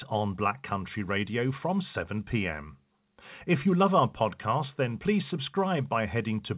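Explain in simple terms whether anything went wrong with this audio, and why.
Nothing went wrong with this audio; it simply came through an ordinary internet call connection, which keeps the sound within the usual phone-line range.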